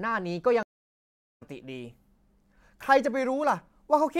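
At 0.63 s the speech drops out completely for about 0.78 s, until 1.43 s, which is a stream reconnect. The connection broke, the player went silent while it re-established the link, and then it started a fresh decoder partway through the stream. When sound returns it picks up roughly 0.7 s further along than where it stopped, as a live feed would, so a section of speech is skipped, and the first frame fades in.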